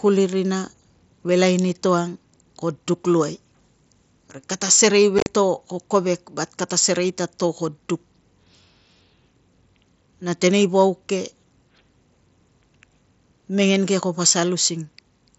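From 5.19 to 5.27 s, unconcealed Bluetooth headset packet loss chops 60 ms into abrupt silent gaps, longest 37.5 ms; unlike concealed loss, nothing fills them.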